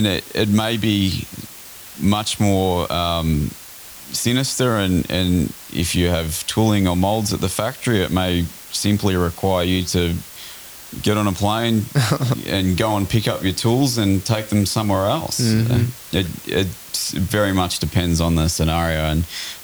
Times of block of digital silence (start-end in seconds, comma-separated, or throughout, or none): none